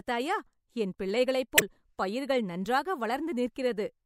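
Speech, with damaged data in a compressed stream from 1.55 to 1.62 s, between "என் பிள்ளைகளைப்" and "பயிர்கள் நன்றாக". Corrupted bytes there cause the decoder to misread or reject frames and lose sync, producing a brief glitch of about 70 ms while it hunts for the next valid frame header.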